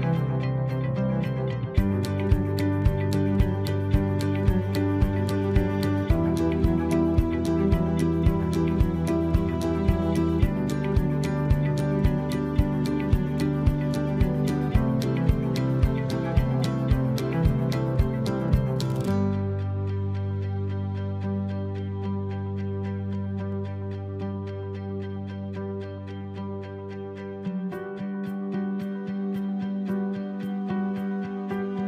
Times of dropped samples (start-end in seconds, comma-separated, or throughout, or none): 2.82, 23.52